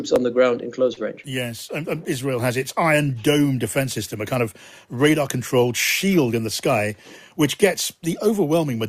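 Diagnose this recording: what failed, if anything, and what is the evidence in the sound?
A short stall from a late packet at the network stage: one packet arrived late, the jitter buffer ran dry, and the receiver held the last sound for about 35 ms before resuming exactly where it stopped. Between 0.93 and 0.99 s the sound hangs unnaturally long with a slight buzz or dip, nothing is lost, and everything afterwards runs 35 ms later.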